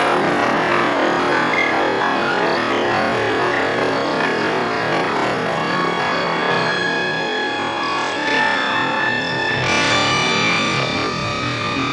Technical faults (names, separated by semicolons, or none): none